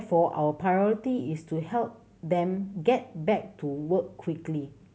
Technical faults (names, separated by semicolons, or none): none